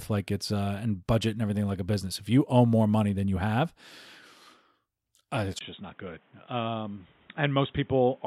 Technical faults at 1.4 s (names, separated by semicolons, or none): none